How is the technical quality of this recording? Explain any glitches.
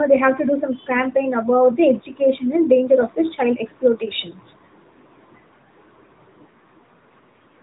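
The quality is limited by one fault running through the whole clip: AMR narrowband mobile codec damage, plainly audible from start to finish. Nothing above about 3.8 kHz survives, so the speech sounds thin and boxed in. The codec rebuilds speech from a vocal-tract model excited by a few pulses per short sub-frame. That gives a buzzy, synthetic edge to the voice. The degree of damage points to an upper-range bitrate of around 10 kbps.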